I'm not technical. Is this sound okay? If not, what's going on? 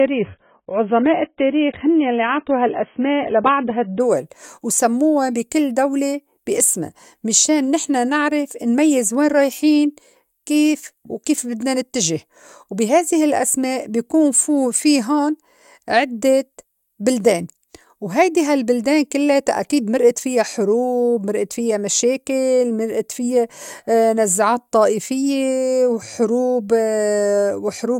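No. For the first 4 seconds the speech sounds dull and muffled, then jumps to clearer quality with no gap: an adaptive stream starting at a low bitrate, not a dropout.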